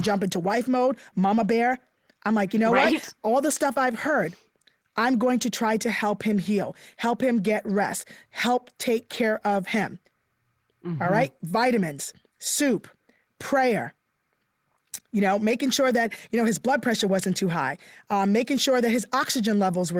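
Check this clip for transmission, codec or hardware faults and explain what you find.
Checking this clip turns up no faults to explain.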